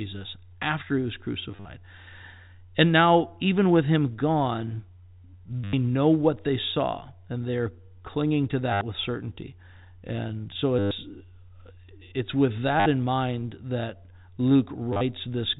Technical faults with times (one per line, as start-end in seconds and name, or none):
1.51-1.65 packet loss with last packet repeated
5.64-5.73 packet loss with last packet repeated
8.73-8.81 packet loss with last packet repeated
10.79-10.91 packet loss with last packet repeated
12.80-12.86 packet loss with last packet repeated
14.93-15.01 packet loss with last packet repeated